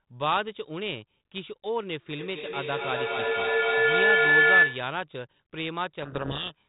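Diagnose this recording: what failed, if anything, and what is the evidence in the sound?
Two devices sharing the call in one room closed an acoustic loop from loudspeaker back into microphone, a call-processing failure, and the loop gain exceeded unity. The result is a feedback howl from 2.19 s to 5.03 s. Each pass round the loop reinforced the frequencies it favoured, so the sound narrowed to a tone near one and a half kilohertz, pulsing roughly every third of a second at the loop delay and peaking about 10 dB above the speech.

At the codec stage, the receiver began unpacking the G.726 code words with their bit order reversed relative to the sender. This codec payload misread runs from 6.02 s to 6.67 s. Each frame still looks structurally valid, but the ADPCM difference values are read wrongly, so the decoder's adaptive prediction is driven by nonsense. The speech there is buried under harsh, gritty distortion, in contrast to the earlier stretches, where the 32 kbit/s G.726 coding leaves only light, band-limited colouring.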